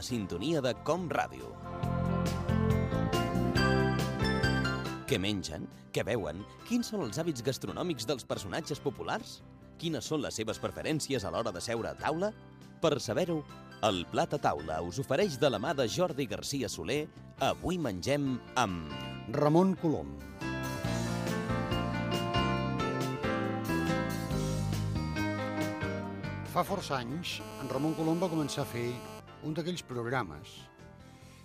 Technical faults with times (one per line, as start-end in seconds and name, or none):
27.40-29.20 GSM phone buzz